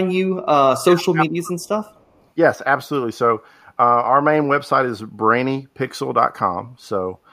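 At 1.63 to 1.68 s and again from 1.86 to 2.24 s, a faint delayed copy of the speech returns 257 ms late, about 40 dB below the direct signal. This is echo leak, likely from a far-end loudspeaker whose echo canceller passed residual pickup.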